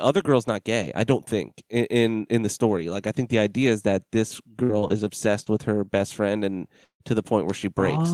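From 4.63 to 5.08 s, repeated packet loss leaves four holes, the longest 55 ms. Patching about a quarter of that stretch makes the speech choppy.

Between 5.44 and 5.49 s, a short concealed packet loss of about 20 ms is filled by extending the preceding sound, heard as a brief smear.

Within it, from 5.46 to 5.48 s, a lost packet rebuilt from error correction plays a low-bitrate copy, so the audio turns momentarily rougher and noisier.

From 6.84 to 7.03 s, a long network dropout is the likely cause. The last sound is stretched into a fading buzz or hiss, then about 100 ms of silence follows before the speech returns.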